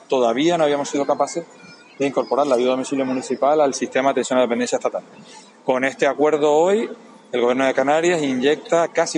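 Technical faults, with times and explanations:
5.92 s, dropped samples: a single sharp click, likely from a couple of missing samples that make the waveform jump abruptly to a later value.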